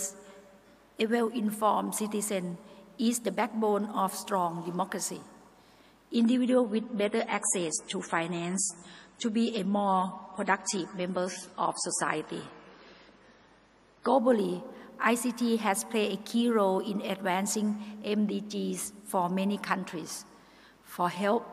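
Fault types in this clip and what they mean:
Adaptive stream at a lower bitrate: from 6.16 to 14.16 s the treble abruptly disappears above 11.4 kHz with no gap, consistent with a stream dropping from about 128 to 32 kbit/s MP3.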